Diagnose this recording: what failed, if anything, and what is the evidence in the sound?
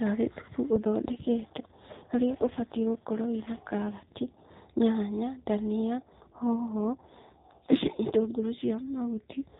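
AMR rate drop, network-driven at the codec: from 0.77 to 4.47 s and 5.94 to 9.44 s, speech turns buzzier with the band unchanged and no gaps, which fits 12.2 falling to 5.9 kbps.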